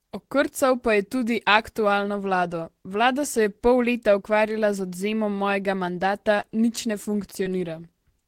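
A brief smear or wobble interrupts the speech from 6.40 to 6.44 s, just after "odvzemom mojega mandata", and a second one follows from 7.43 to 7.47 s. Both are short concealed packet loss: about 20 ms of audio failed to reach the decoder in time, and the receiver bridged each gap by extending the preceding sound for roughly 20 ms before blending back into the real signal.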